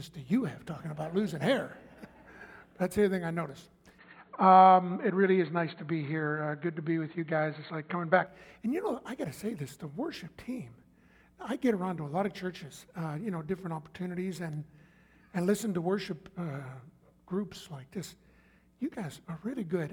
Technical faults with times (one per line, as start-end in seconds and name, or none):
3.99-8.27 input switched to a poorer device